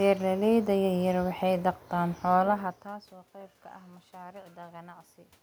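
No technical faults can be heard anywhere in the recording.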